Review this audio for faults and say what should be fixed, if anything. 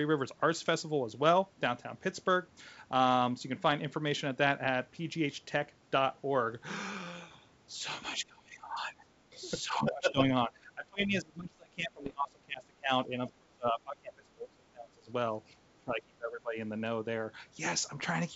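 Bit errors on an ADPCM link occur at 6.52 to 6.67 s, 12.04 to 12.13 s and 17.85 to 18.12 s. Each burst brings pops and rough, grainy stretches with brief jumps in level. A flipped bit does more than corrupt one sample. It knocks the decoder's step size and predictor off track, so the damage keeps ringing until the adaptation settles. The error rate is low, a small fraction of a percent. Protecting the link with error detection, and muting or concealing frames that fail the check, would prevent this.

Speech suppressed in double talk appears at 8.24 to 9.01 s, 9.62 to 10.2 s, 10.47 to 15.1 s and 15.72 to 16.57 s. The speech dips, dulls or breaks into pieces, falling by as much as 20 to 25 dB. The longest stretch lasts about four seconds. This is likely an echo canceller that could not separate the near talker from loudspeaker echo while both sides spoke, and so attenuated everything. The wideband G.722 band itself sounds clean beneath the dips. 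A canceller with proper double-talk detection that holds its adaptation rather than suppressing would prevent this.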